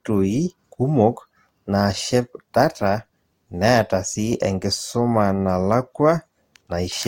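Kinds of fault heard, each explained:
Transcoding between lossy codecs: This speech has nothing above 16.6 kHz and a layered coding texture, with two different sets of artefacts sitting on top of each other. That's likely a second lossy pass over already-coded audio, and it fits a low-bitrate Opus encode followed by a Vorbis encode around 64 kbit/s. The Vorbis stage spends its bits re-describing the earlier damage and adds its own, so the result is worse than either pass alone.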